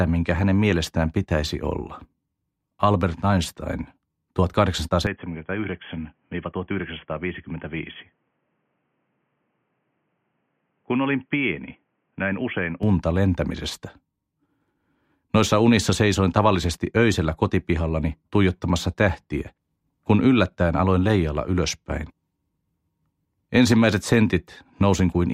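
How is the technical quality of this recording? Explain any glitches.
The recording has one clear fault, a stretch where the sound quality drops sharply before recovering.

From 5.07 s to 12.83 s, the sound turns dull and boxy, with nothing above 3.4 kHz, and comes in roughly 10 dB quieter over a faint new noise floor. The change is instant at both ends, with no gap. This points to the input switched to a poorer device, likely a headset's call profile or a narrower-band microphone, whose limited bandwidth and different gain account for the muffled, quieter sound.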